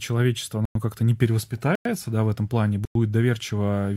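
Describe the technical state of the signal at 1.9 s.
At 1.9 s the speech has coarser artefacts than the opening second. This is the adaptive stream at a lower bitrate, running from 1.28 s to the end. The connection slowed and the player switched abruptly, without a gap, to a leaner version, consistent with a drop from roughly 96 kbit/s AAC-LC to about 40 kbit/s HE-AAC with synthesised treble.

Just before that moment, a silent hole of 100 ms runs from 1.75 to 1.85 s. This is a gap between chunks. The audio arrives in 1-second pieces, and at this join silence was inserted, probably from padding or a late chunk start, so the sound is interrupted without any of it being lost.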